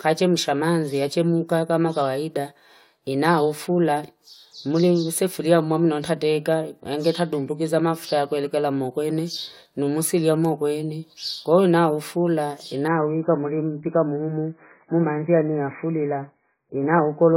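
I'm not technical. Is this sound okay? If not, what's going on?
No. At about 12.88 s, right after "ina ufula", the speech suddenly goes dull and muffled through to the end. That's an adaptive stream at a lower bitrate: the connection slowed, so the player switched to a much thinner version, losing everything above about 2.5 kHz.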